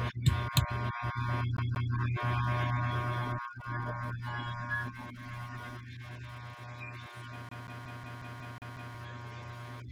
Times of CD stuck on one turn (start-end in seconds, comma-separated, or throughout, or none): 1.57-1.93, 7.49-8.94